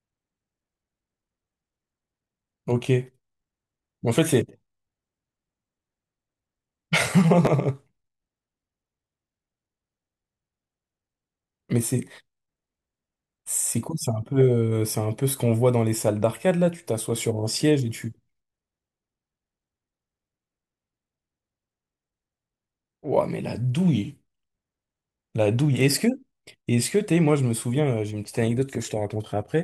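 A 10 ms chunk of audio was delivered one chunk late, so between 7.45 and 7.47 s it plays after the chunk that should follow it. Nothing is lost, but the swapped order leaves three hard joins, heard as a brief jumbled flicker in the speech.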